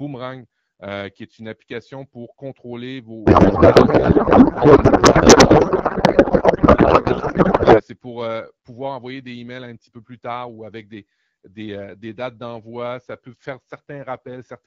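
Right after "une application pour contrôler", at 3.26 s, the speech collapses into garbled noise and warble that barely tracks it, and it stays that way until 7.82 s, just before "c'est pour pouvoir envoyer". That's a codec payload misread. The AMR frames were packed octet-aligned but unpacked as bandwidth-efficient, so every field lands in the wrong spot. Around it, the wideband AMR sounds clean, consistent with a 12.65 kbit/s mode.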